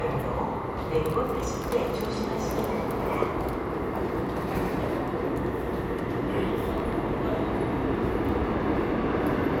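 No technical faults can be heard anywhere in this audio.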